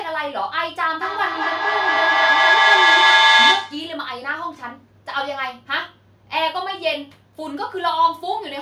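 From 1.01 s to 3.98 s the speech is caught in feedback echo between two devices. Two devices in the same room share the call. One plays the other's microphone signal aloud, and that microphone hears it again. Neither echo canceller removes sound played by the other device. Each word returns about every fifth of a second, thinner and more ringing each time. The loop is loud. Repeats pile up instead of fading, peaking about 10 dB above the speech.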